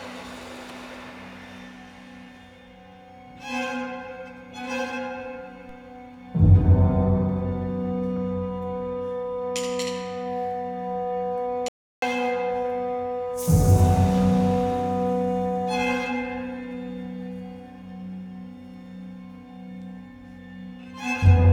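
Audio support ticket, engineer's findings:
Low thump at 5.69 s, sound continues unchanged. DC step: waveform zero line jumps, then drains away through a roughly 5 Hz high-pass, probably from a converter recalibrating or an offset input switching in.

Hard cut to total silence 11.68–12.02 s, about 0.34 s, no room tone in the gap. Audio dropout to silence, likely lost input with the recorder writing silence.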